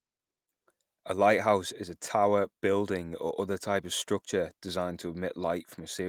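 No dropouts, clicks, distortion or timing errors turn up anywhere in the recording; nothing to flag.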